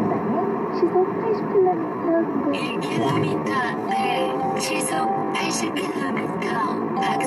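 At 1.55 s the audio slows abruptly and stays slow to the end. This is a time-stretched section, playing at about 0.66 times the original pace. Pitch is unchanged. It likely comes from software padding the sound by repeating short pieces, which makes it drag.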